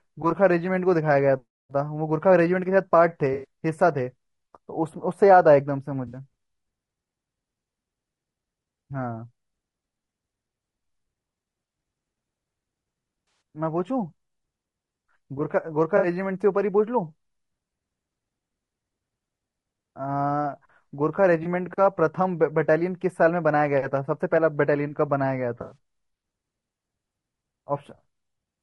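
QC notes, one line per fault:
throughout, low-delay AAC compression: The speech sounds rough and grainy, with a hiss filling the gaps between the voice's harmonics and a top band that sounds thin and synthetic. This is likely a low-delay AAC codec of the AAC-ELD type, with the damage level suggesting a bitrate around 32 kbps. At this low bitrate each frame gets too few bits, so the coder lets noise fill between the harmonics and approximates the upper band.
3.33–3.45, 6.07–6.17, 13.27–13.41, 15.97–16.07, 21.43–21.46, 25.61–25.77, AAC frame loss with concealment: Each of these spots is a brief smeared, noisy or phasey patch where the voice loses its detail. The gaps cover about 100, 60, 140, 60 and 20 ms, and 140 ms spread over 160 ms in the last spot, where the longest unbroken stretch is roughly 100 ms. In each case the decoder is missing audio and fills it by reusing the last good spectrum with randomised phase, which produces the blurred patch.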